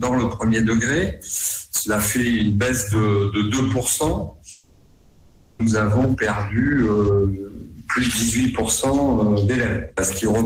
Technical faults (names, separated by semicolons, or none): long network dropout